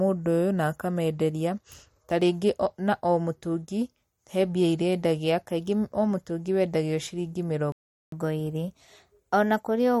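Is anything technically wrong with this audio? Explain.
Yes. The speech has three faults.

Throughout, there is a watery, swirling texture, plainly audible, with chirpy s sounds and soft consonant onsets. This is likely MP3 compression. The damage points to a low bitrate, around 48 kbps. With so few bits, the encoder discards quiet frequency lines. Those lines flicker on and off between frames. It also cuts the treble.

At 7.72 s, just after "wendagio ciringĩ", the sound cuts out. It stays silent until 8.12 s, about 0.4 s. This is a playback stall. The player most likely ran short of data, or its thread was held up. It had nothing to send to the output. When the sound returns, it resumes where it stopped. No speech is lost.

From 8.12 s to 10.0 s, the speech runs fast. This is catch-up at higher speed. The player resamples its queued backlog to regain the time lost in the stall. Playback runs at 1.1 times normal speed. 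Resampling raises the pitch along with the speed, by roughly one and a half semitones. The voice sounds hurried and slightly higher throughout this stretch.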